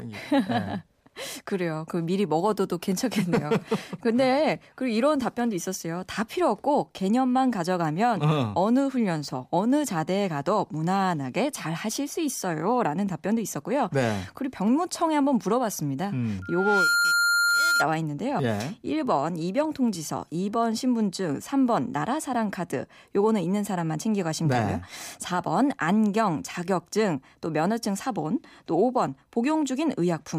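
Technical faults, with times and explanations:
16.42 to 17.87 s, loudspeaker feedback squeal: a steady tone at 1.4 kHz swells up over roughly half a second and ends up sitting a few dB above the speech before it cuts off. That's the classic loop where the mic is hearing its own loudspeaker, and at that one frequency the round-trip gain tops unity, so the tone keeps feeding itself and climbing until something breaks the loop.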